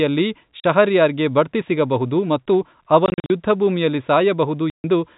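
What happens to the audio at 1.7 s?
At 1.7 s the speech carries on intact, with nothing breaking into it beyond the steady narrow telephone band of the G.711 coding that runs through the whole recording.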